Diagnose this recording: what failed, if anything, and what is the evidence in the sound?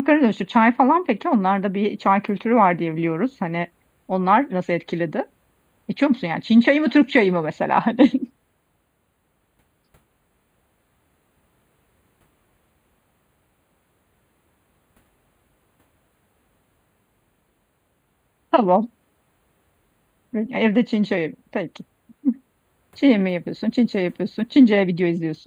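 What failed is a channel delay with comb filtering, right through the speech. The top end sounds hollow and dull, with fixed notches starting around 5 kHz. That fits one channel arriving about a tenth of a millisecond late, a few samples, at the driver or buffer stage before the mono sum.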